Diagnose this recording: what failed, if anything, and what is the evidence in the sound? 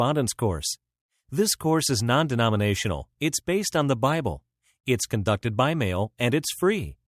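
Nothing in the signal chain appears to have failed, and the speech signal stays continuous and stable throughout the recording.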